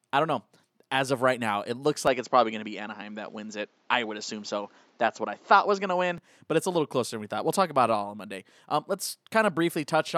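Speech that turns duller and boxier at 2.07 s, with nothing above 7.6 kHz, a faint new background noise and no gap or level jump, then clears again at 6.18 s. This is likely an input switched to a poorer device and back.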